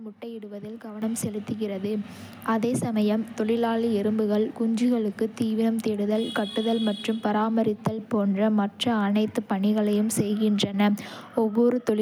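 At 1.02 s, just before "செலுத்துகிறது அதே சமயம் தொழிலாளி", the microphone volume is stepped up: the level of the whole signal jumps by about 9 dB in a single step rather than ramping. The calling software judged the microphone input too quiet and raised the device's capture volume at once. Because the gain is applied before any processing, the speech and the background noise rise together and stay louder from that point on.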